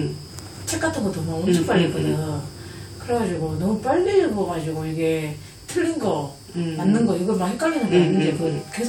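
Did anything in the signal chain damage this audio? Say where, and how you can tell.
No, nothing in the signal chain can be heard damaging these sounds: level, continuity and timing hold steady throughout, with no stage leaving an audible mark.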